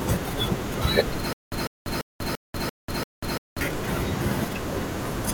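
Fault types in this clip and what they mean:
Stutter with silent gaps: playback likely stalled and retried, replaying its last fragment each time. From 1.33 to 3.61 s the same 150 ms burst of speech returns six times, every 341 ms, with 190 ms of digital silence between, and the intervening speech is lost.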